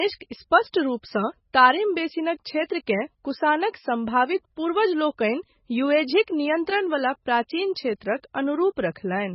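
Throughout the speech, heavy MP3 compression is the likely cause of watery, swirling artefacts; a spectrogram shows nothing above 5.6 kHz and flickering gaps, consistent with a very low bitrate near 16 kbps.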